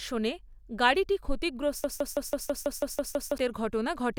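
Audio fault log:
1.84–3.38 s broken-record loop: a 164 ms fragment repeats identically nine times without decay, unlike echo, likely from a stall resending held audio, so the speech due then is lost.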